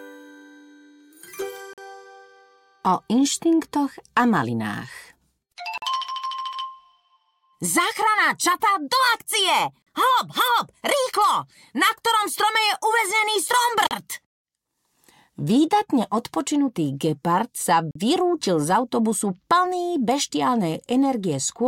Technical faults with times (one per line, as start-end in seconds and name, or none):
1.73-1.78 gap between chunks
5.78-5.82 gap between chunks
9.82-9.87 gap between chunks
13.87-13.91 gap between chunks
17.91-17.95 gap between chunks